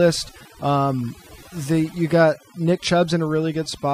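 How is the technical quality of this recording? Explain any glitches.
The recording suffers from overdone noise removal, present throughout the whole clip. A noise reduction process was set far too aggressively, so any frequency band that sits close to its estimate of the background noise gets pulled right down or switched off, and the softer parts of the speech are cut away along with it. The result is a background that drops away and breaks up into twinkling, warbling specks.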